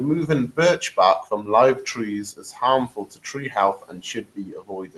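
Speech is cut by the noise suppressor at 1.75–1.98 s, 2.25–2.6 s, 2.88–3.36 s and from 3.77 s to the end. The suppressor mistakes speech for noise and pulls it down by about 8, 14, 16 and 19 dB, so those stretches sound swallowed and faint. The waveform envelope sags there, and spectrogram energy fades toward the background floor.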